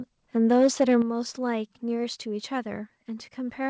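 From 0.50 to 0.96 s, the loudest syllables turn harsh and crackly. The peaks sound flattened, with a gritty edge on top. This is microphone overload. The likely cause is an input level set too high, so the peaks ran past the converter's ceiling by about 3 dB. Their tops were sliced off. Only a small share of the waveform is cut, but those squared-off peaks add the rough buzz you hear.

At 1.02 s, the level drops all at once. The speech and the background fall together by about 7 dB. It is a single step, with no fade. This is the microphone volume stepped down. It comes right after the overloaded stretch. The likely cause is the call software reacting to that distortion by cutting the device's input gain in one move. From this point the clip sits noticeably quieter. The call path's bandwidth limit is audible throughout, with nothing above 8 kHz.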